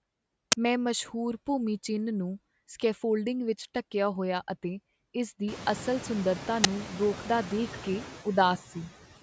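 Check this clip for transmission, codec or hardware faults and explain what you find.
Two faults are present: noise suppressor artifacts throughout, and two bursts from an uninitialised buffer.

The noise suppressor artifacts run for the whole clip. The suppressor estimates the steady noise in each frequency band and turns those bands down, frame by frame. Here it pulls the noise down by about 14 dB. The background drops in the gaps and comes back under the speech. The room noise grows by about 23 dB near 5.5 s.

The uninitialised buffer bursts occur at 0.52 s, just before "ਮੈਂ ਮਸ਼ਹੂਰ ਭੂਮੀ ਚਿੰਨ੍ਹ", and at 6.64 s, between "ਇਸ ਦੀ ਅਸਲ ਸੁੰਦਰਤਾ" and "ਰੋਕਦਾ ਦੇਖ". Each lasts 10 ms, which fits a single 10 ms block. The block was sent to the output before any audio was written into it. Whatever values were left in memory played as samples. Each burst is a sudden, loud crack of digital noise.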